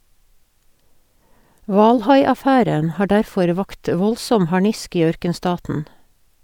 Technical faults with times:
none

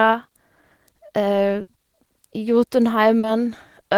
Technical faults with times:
1.61-1.69 burst of packet loss
3.19-3.25 short concealed packet loss

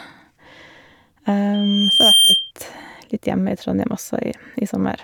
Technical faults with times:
1.54-2.51 loudspeaker feedback squeal

